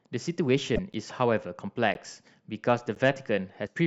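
A broken MP3 bit reservoir is the likely cause of the jump at 0.75 to 0.79 s, where the speech skips ahead and a brief chirp or noise burst appears. Frames after a cut, each about 26 ms, read another frame's bytes. The same happens at 3.66 to 3.68 s.

A gap between chunks appears at 0.93, 1.94 and 2.95 s, one every second. Each is a 12 ms silence at a join, with nothing missing.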